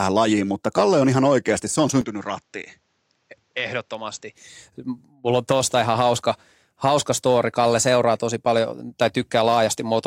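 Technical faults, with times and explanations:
2.01 to 4.35 s, input switched to a poorer device: Right after "ihan oikeasti se on", the speech drops by about 10 dB and loses everything above 7.8 kHz. A new noise floor appears, roughly 45 dB under the speech. The change is abrupt, with no gap. At 4.35 s the fuller sound returns. The likely cause is the recorder changing to another microphone or headset mid-take. That device passes a narrower band, at its own level, with its own noise.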